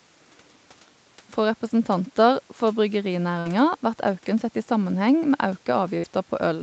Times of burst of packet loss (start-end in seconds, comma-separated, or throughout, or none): 3.39-3.47, 5.97-6.05